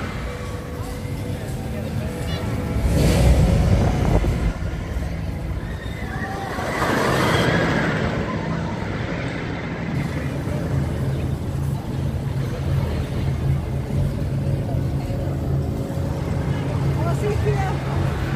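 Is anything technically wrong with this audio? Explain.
Yes. From 7.46 to 9.95 s there is channel delay (comb filtering). One channel lags by roughly a twentieth of a millisecond, a couple of samples, so the mono sum cancels around 10 kHz and dulls the top. A spectrogram shows a steady dark notch band there.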